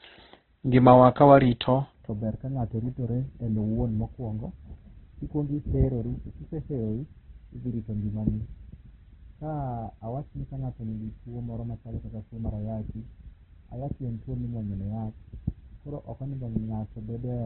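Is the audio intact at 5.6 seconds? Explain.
No. At 5.6 seconds, as throughout the clip, the speech is muffled, rough and grainy, with nothing above 4.3 kHz. The likely cause is heavy Opus compression: band-filled noise replaces detail, which fits a very low bitrate near 12 kbps. A spectrogram shows a flat ceiling at 4.3 kHz and smeared, noisy harmonics.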